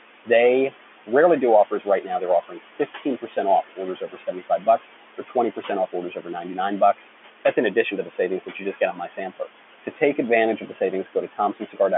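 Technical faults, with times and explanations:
Throughout, noise suppressor artifacts: the suppressor treats steady room noise as something to remove, frame by frame, cutting it by about 17 dB. The background, about 12 dB under the speech, sinks in pauses and rises under talking.
1.65–6.59 s, 6.93–7.08 s, 7.54–9.47 s, 9.84–10.18 s, 10.58–11.8 s, speech cut by the noise suppressor: from just after "rarely do", the suppressor mistakes quieter speech for noise and drops it by about 15 to 18 dB. Soft consonants and endings sound swallowed, most of all in the first stretch, where roughly two seconds are affected.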